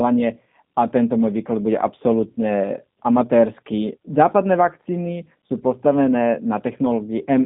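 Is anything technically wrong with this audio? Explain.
Yes. Throughout, the speech carries G.729 codec damage: nothing passes above 3.7 kHz or below about 150 Hz, and the voice sounds plainly rough and synthetic, consistent with an 8 kbit/s coder rebuilding each frame from a vocal tract filter, pitch predictor and sparse pulses.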